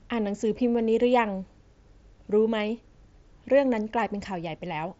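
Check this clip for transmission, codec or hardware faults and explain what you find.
Nothing wrong turns up here; the speech arrives over an mSBC Bluetooth headset link, reaching up to about 8 kHz with the light graininess on louder moments that this codec leaves behind.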